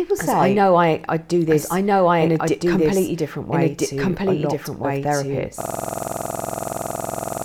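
From the start, the speech carries a doubled audio track: a second full-band copy, about equally loud, trails roughly a second and a half behind, likely from a slower second capture path. At 5.61 s a system hang loop begins: one 46.44 ms slice repeats at 21.5 Hz until the end, a rasping buzz-stutter consistent with a 2048-sample buffer.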